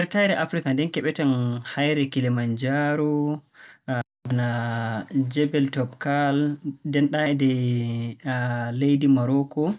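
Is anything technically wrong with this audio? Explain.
No, nothing technically wrong can be heard in this speech recording. No dropouts, distortion or other disturbances stand out at any point in the audio.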